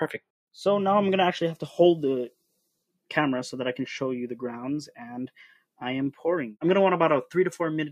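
No technical faults can be heard anywhere in the audio, with the signal staying steady and intact throughout.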